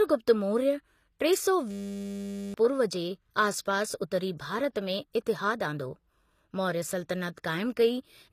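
Throughout the speech, the treble is rebuilt rather than original and is plainly damaged, with nothing above 14.9 kHz. Upper harmonics fail to line up with the lower band. This is likely HE-AAC compression with spectral band replication, which fits a low bitrate near 24 kbps.

From 1.71 to 2.54 s, after "टे सौ" and before "पूर्व जे", a system hang loop repeats one 10 ms piece of audio 83 times. It forms a steady 100 Hz buzz while the audio buffer cycles unattended, and around 0.7 s of real audio is lost.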